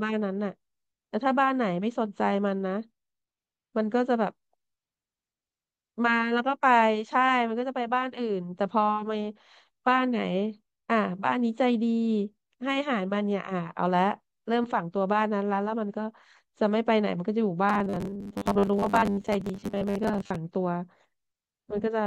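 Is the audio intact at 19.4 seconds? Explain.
No. At 19.4 seconds the speech is inside a stretch of robotic sound from repeated short buffers, running from 17.69 to 20.37 s. The likely cause is new audio arriving too slowly, so the player repeats a short slice of about 10 ms to fill the gaps. About half of the sound is repeated this way. The repetition stamps a fixed 100 Hz pitch onto the sound. The speech becomes a stiff, metallic buzz that only loosely tracks the words.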